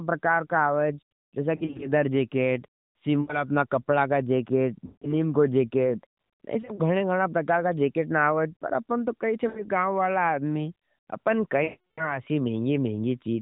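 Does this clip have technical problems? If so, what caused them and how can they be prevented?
Yes. Radio errors corrupted speech frames, causing lost AMR speech frames. The decoder stretched the last good sound and faded it, giving warbles or dropouts at 1.56–1.89, 3.22–3.37, 4.86–5.27, 6.62–6.81, 9.48–9.65 and 11.64–12.20 s, with the last fading to silence. Stronger radio coverage, or a more robust codec mode with extra error protection, would prevent this.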